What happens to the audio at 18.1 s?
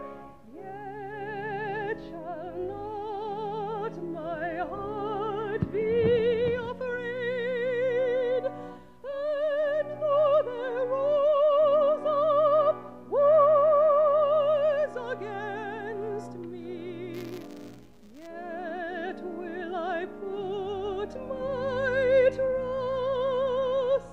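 Buffer tearing runs from 17.13 to 18.27 s, so 18.1 s falls inside it. The software filling the ring buffer and the hardware draining it have drifted, so their positions cross within each period. A small slice of every buffer replays audio from about 20 ms earlier, with abrupt joins on each side. That repeats at 172 Hz, which fits a 256-sample buffer, and is heard as a steady robotic buzz riding on the sound.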